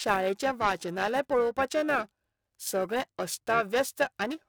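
From start to finish the speech carries periodic clock jitter: the converter's sample clock is being shaken by interference at around 1 kHz, so every component of the voice gains sidebands spaced that far above and below it, most strongly in the brighter, higher content. It sounds like a rough, metallic edge riding on the voice that vanishes in pauses. Unlike random jitter, which adds a hiss-like noise floor, this roughness is tonal and tied to the signal.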